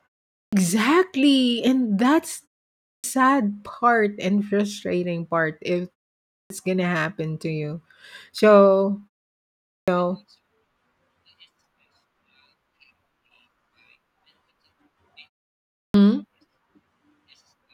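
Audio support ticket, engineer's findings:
Clipped start after a pause at 0.36, 2.88, 6.35, 9.71 and 15.79 s. First 150 to 170 ms of speech lost after each gap. Output device sleeps in silence and wakes late. Waveform: hard onset from silence, no rise. Spectrogram: opening sound energy missing.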